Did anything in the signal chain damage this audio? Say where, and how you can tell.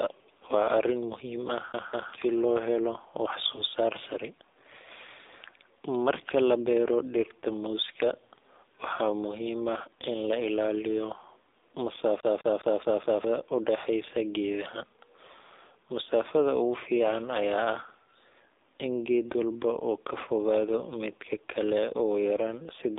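Yes, at the codec stage. This is speech through the AMR narrowband mobile codec: nothing above about 3.7 kHz, thin lows below 300 Hz, and a plainly buzzy, synthetic edge. That fits a low mode around 7.4 kbps, where the excitation pulses can't carry much detail.

There's also a lost AMR speech frame on the network side, at 3.56 to 3.63 s. You get a brief dip or warble rather than a gap, because the decoder kept replaying the last good pitch and vocal tract settings at reduced gain. It sounds like a single dropped frame.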